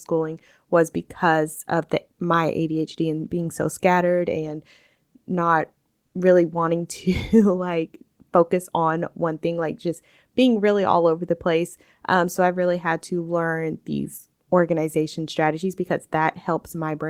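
Comfort noise in place of the background appears from 6.06 to 6.14 s, just before "really wanting". For those 80 ms the room's real background, already faint at about 55 dB below the loudest passages, gives way to a smooth, featureless hiss at the same level. The likely cause is discontinuous transmission, as in Opus DTX: the sender's voice detector judged the gap silent and stopped sending audio, so the receiver filled it with synthetic noise shaped roughly like the background.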